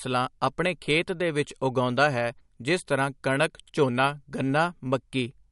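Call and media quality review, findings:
MP3 compression, whole clip: nothing above 11.2 kHz, plainly audible watery swirl and chirpy sibilants. Likely a starved MP3 encoder fixing a treble cut-off and toggling weak frequency lines per frame, which fits roughly 53 kbps.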